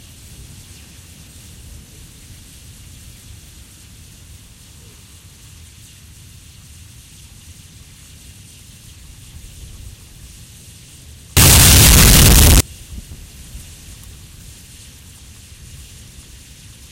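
From 11.37 to 12.60 s the sound turns into a blast of very loud, harsh distortion in which even the quiet moments are as loud as the strong ones. The likely cause is signed and unsigned mixed up, with 16-bit samples read with the top bit flipped, so each zero crossing jumps across the whole range.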